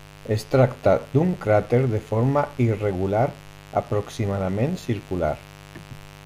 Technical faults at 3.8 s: mains buzz

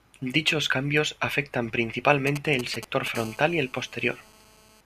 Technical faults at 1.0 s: none

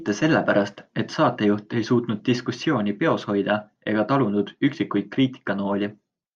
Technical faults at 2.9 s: none

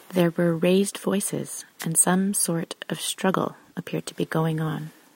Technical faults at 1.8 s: wireless microphone noise hit

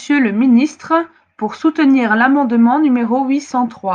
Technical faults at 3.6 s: none

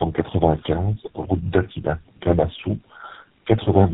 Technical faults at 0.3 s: tandem speech coding

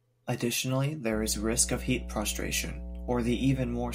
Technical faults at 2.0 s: mains hum

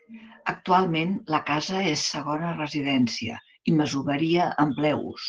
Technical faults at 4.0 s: Opus voice compression

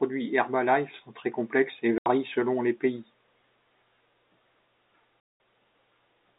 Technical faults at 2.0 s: packet loss filled with silence

